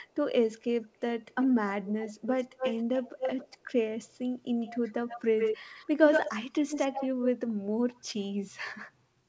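Echo leak: a delayed copy of the speech comes back at 1.31–1.47, 1.86–3.58, 4.04–4.09, 4.6–7.3 and 7.9–8.24 s. It lags 266 ms at first, then 120 ms, and reaches speech level at 4.6–7.3 s. It's likely a speakerphone's echo canceller missing some of what its microphone picked up.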